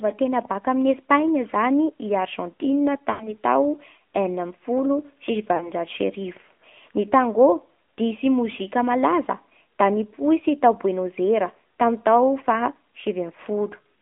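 A thin, buzzy, somewhat synthetic quality runs through the whole clip, with nothing above about 3.5 kHz and little below 200 Hz. This is the AMR narrowband mobile codec at work. The sound is squeezed into a telephone band and rebuilt from a compact vocal-tract model excited by a handful of pulses per subframe. At a middling rate, one that fits the 10.2 kbps mode, that rebuilding leaves plainly audible coding damage.

From 3.12 to 3.34 s the sound smears into a held, warbling stretch that sags in level before normal audio resumes, slightly rough at first. A shorter, similar dip and warble follows from 5.56 to 5.71 s. Both are lost AMR speech frames. Frames arrived corrupted, so the decoder repeated its last good pitch and filter settings at falling gain. The gaps fit roughly 80 ms and 40 ms of missing audio, which would be four and two 20 ms frames.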